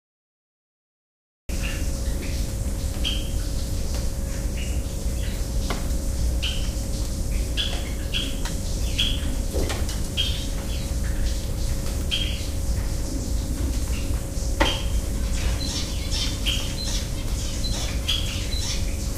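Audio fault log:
0.00–1.49 s, cut-off start: Digital silence holds until 1.49 s, then the sound enters already in progress. There is no attack and no fade-in. Capture began late, so the event's opening was never recorded and it starts abruptly mid-sound.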